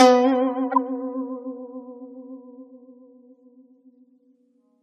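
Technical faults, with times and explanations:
0.72 to 0.78 s, corrupt frame decoded: there's a short glitch in the music, about 64 ms of misplaced energy that peaks fairly loud, around -10 dBFS. Some bits in the compressed stream got flipped, and the decoder played those frames anyway. It read the wrong gains and codes, so the energy landed at the wrong frequencies and came out as a brief artifact. The length fits roughly three damaged frames in a row.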